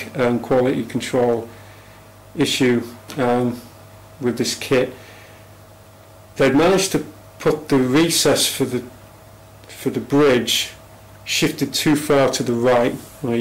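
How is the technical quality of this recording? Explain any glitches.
The recording is compromised by a single persistent fault: hard clipping across the whole clip. The signal is driven about 14 dB past the level the chain can carry, so every peak that exceeds the ceiling is sliced flat. Roughly one sample in twenty sits at that limit. The squared-off tops generate strong high-order harmonics, and with overload this heavy the result is a harsh, gritty fuzz riding on every loud passage rather than occasional crackles.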